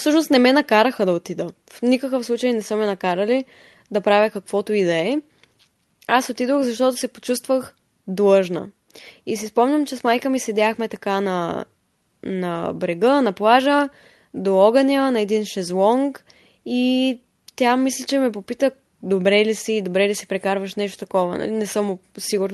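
Listening to this speech recording, nothing technical stood out as a problem.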